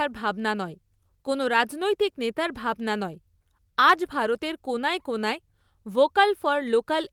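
A lost packet rebuilt from error correction occurs between 4.05 and 4.07 s in this speech. The brief roughening points to a single lost packet whose contents were recovered from a low-bitrate copy carried in the packet that followed, Opus in-band forward error correction. The decoder played that copy, so no gap or dropout is heard. The roughly 20 ms stretch sounds coarser and noisier than the surrounding audio, a short grainy patch in the speech.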